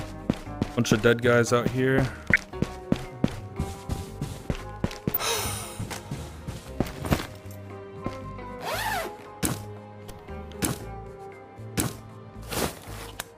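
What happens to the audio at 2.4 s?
Just before that point, from 2.33 to 2.38 s, there is a short burst of DAB burbling. Weak reception lets bit errors slip past the error correction into the MP2 audio data. Corrupted samples put short blips of noise in single sub-bands, and corrupted scale factors make sub-bands jump in level for up to a frame. The burst spans a handful of frames, which fits a low error rate. It sounds like a few quick watery blips over the sound.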